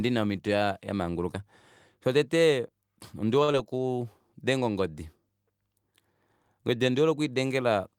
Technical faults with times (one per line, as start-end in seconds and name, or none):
3.43-3.50 short stall from a late packet
3.52-3.55 short concealed packet loss